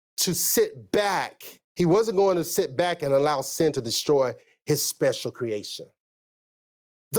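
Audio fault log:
throughout, gain pumping: gain ducks under loud syllables and recovers between them, swinging by about 15 dB, likely from excessive gain feeding a fast limiter.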